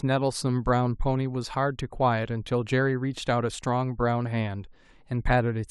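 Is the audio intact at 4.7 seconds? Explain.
Yes, the speech at 4.7 seconds is intact, with no dropout, click or other fault at that moment.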